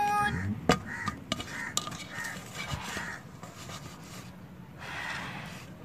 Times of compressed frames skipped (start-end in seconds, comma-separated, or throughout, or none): 2.57-2.59, 4.24